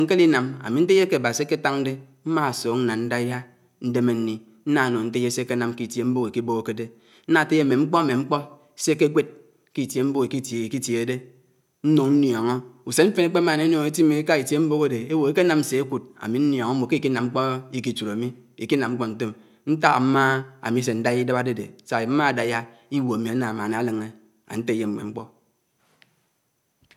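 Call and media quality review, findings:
No audible faults found in the speech path; level, continuity and timing hold steady across the capture.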